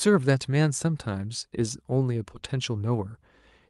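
No technical faults can be heard anywhere in this speech clip, which comes through the call path as expected.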